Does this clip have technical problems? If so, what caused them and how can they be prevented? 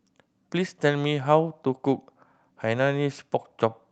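No, there's nothing wrong here; the speech comes through a WebRTC call path with an Opus codec, and nothing calls for a fix.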